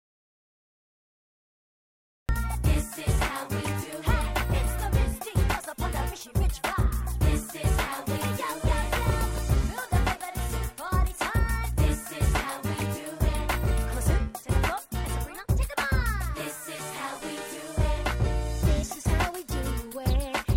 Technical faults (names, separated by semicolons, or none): audio dropout to silence